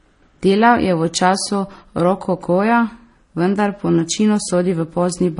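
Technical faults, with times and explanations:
Throughout, transcoding between lossy codecs: the speech has nothing above 10.6 kHz and carries the artefacts of both codecs heard together. This is likely an HE-AAC encode near 24 kbit/s re-encoded as MP3 near 40 kbit/s, each stage adding its own damage.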